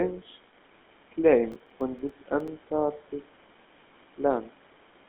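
Processor overload crackle runs from 1.52 to 2.48 s in this speech clip: the processor repeatedly missed its deadlines, leaving around ten short silent gaps with hard edges, which fits buffers of roughly 5 ms, and these pile up into a gritty tearing that stops when the load passes. The GSM full-rate codec colours the whole clip with plainly audible buzzy, gravelly roughness, consistent with its 13 kbps pulse-excited vocal-tract model, and the sound is squeezed into a narrow telephone band with nothing above 3.8 kHz.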